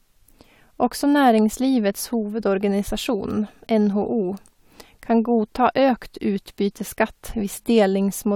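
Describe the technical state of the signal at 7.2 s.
At 7.2 s the speech signal is intact, with no audible technical fault at that moment.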